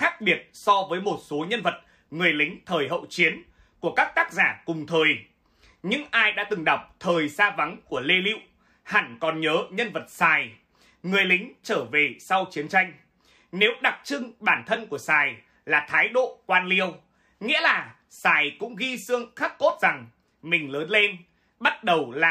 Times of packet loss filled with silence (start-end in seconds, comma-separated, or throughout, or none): none